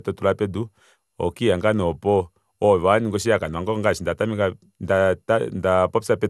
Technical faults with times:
0.00-6.29 generation loss

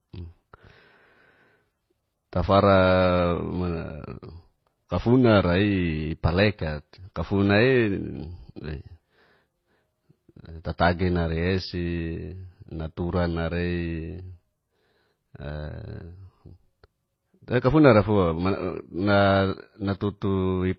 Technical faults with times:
0.00-20.78 transcoding between lossy codecs

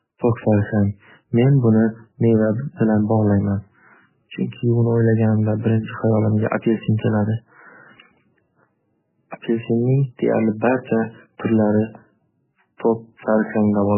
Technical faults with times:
0.00-13.97 MP3 compression

